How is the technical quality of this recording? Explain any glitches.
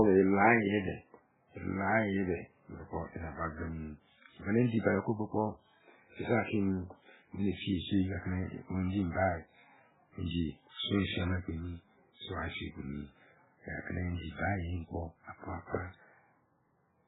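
The quality is poor, with heavy damage running through the whole recording. The likely cause is MP3 compression at a very low bitrate, which fits around 8 kbps. Starved of bits, the encoder cuts everything above 3.8 kHz and drops weak frequency lines from frame to frame, so the speech sounds dull, watery and swirling, with smeared onsets.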